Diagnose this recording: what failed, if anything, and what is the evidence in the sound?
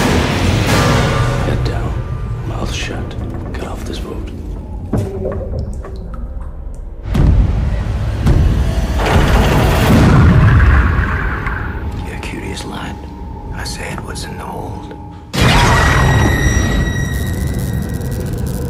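Nothing in the recording points to a failure at any stage of the chain. No event in the sound calls for a diagnosis.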